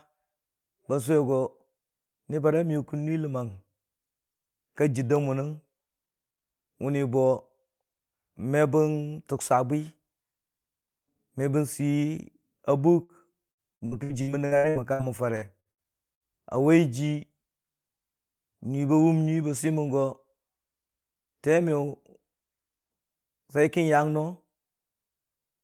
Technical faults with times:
13.03-13.12 burst of packet loss
13.51-16.23 repeated packet loss (robotic sound)

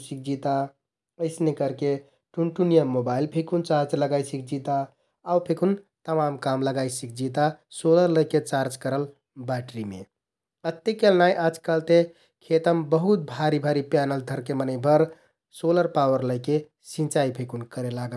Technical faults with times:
none

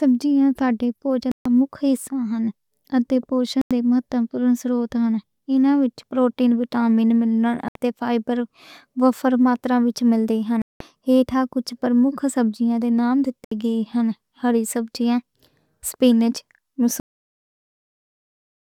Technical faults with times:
1.31-1.46 Bluetooth dropout
3.61-3.71 Bluetooth dropout
7.68-7.75 Bluetooth dropout
10.62-10.81 Bluetooth dropout
13.44-13.52 Bluetooth dropout
17.00-18.76 cut-off end

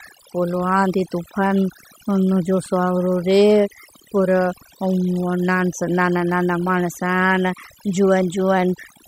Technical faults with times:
0.00-9.07 overdone noise removal

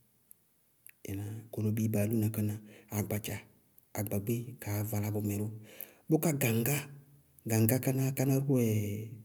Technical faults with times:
none

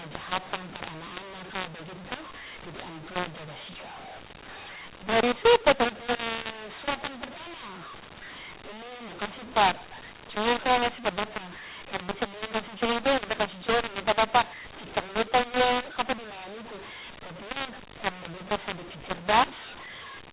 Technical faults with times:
0.00-20.32 mu-law and A-law mixed up

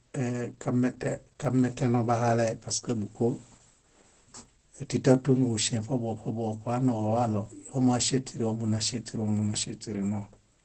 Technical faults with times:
0.00-10.65 Opus compression
1.45 overlapping chunks
4.45 overlapping chunks
7.46 overlapping chunks

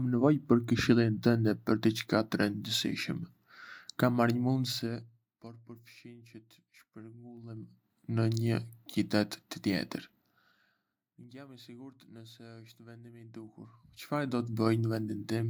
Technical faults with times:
4.61-5.38 zipper noise
7.34-8.02 zipper noise
10.15-11.35 zipper noise
13.14-14.68 zipper noise

